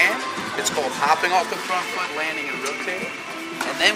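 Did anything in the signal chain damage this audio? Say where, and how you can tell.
Yes. Crude rate conversion during sample-rate conversion runs throughout, heard as a gritty, inharmonic fizz following louder, brighter passages. Repeating nearest samples from 44.1 to 48 kHz leaves error roughly 20 dB below the signal, which appears as stray tones on a spectrogram and as small stair-steps in the waveform.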